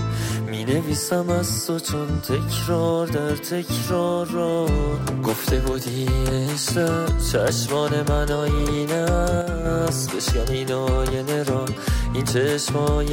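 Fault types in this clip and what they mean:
One channel drops out: from 9.42 to 9.65 s the level steps down abruptly by about 6 dB and back, likely one stereo side lost before the mono sum. Unlike a full dropout, the sound never goes silent. Unlike a fade, the change has no ramp.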